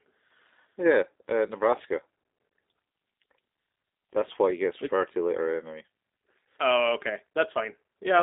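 From start to finish the speech carries the sound of the G.729 codec, a low-rate telephone coder that rebuilds each 10 ms frame from a vocal tract filter, a pitch predictor and a handful of pulses rather than the waveform itself. The line runs only from about 250 Hz to 3.7 kHz, with nothing above 3.8 kHz, and the result is a clearly rough, buzzy, synthetic edge consistent with an 8 kbit/s stream. That roughness is what separates it from simple narrowband filtering.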